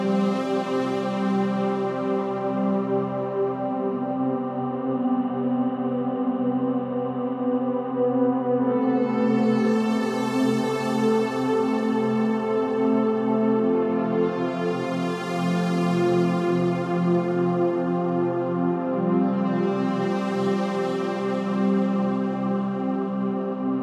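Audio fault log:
No faults are audible anywhere in the sounds.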